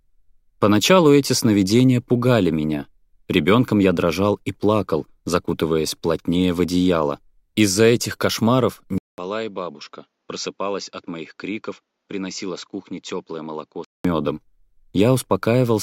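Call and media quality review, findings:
Input switched to a poorer device, 8.98–14.05 s: 0.2 s gap, then audio dulls, nothing above 7.6 kHz, roughly 10 dB quieter. Likely a capture-device change mid-recording.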